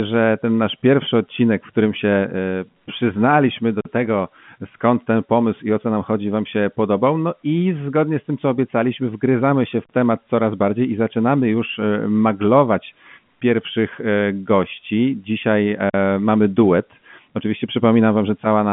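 Gaps between chunks interrupt the speech at 3.81, 9.85 and 15.90 s: hard-edged 44 ms silences recurring every 6 s, consistent with chunks played back late or padded at joins.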